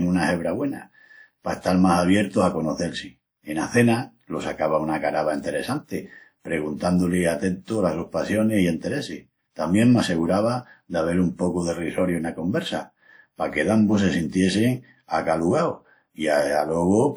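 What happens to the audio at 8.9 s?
At 8.9 s the speech carries the same coding damage heard across the whole clip, likely WMA compression. It is plainly audible. A transform codec like this codes sound in long blocks, so its quantisation noise smears over tens of milliseconds around each syllable. Weak detail is dropped, and at a bitrate near 48 kbps the bandwidth still reaches about 20.1 kHz. The result sounds ringing and washy. A hiss rises and falls with the speech.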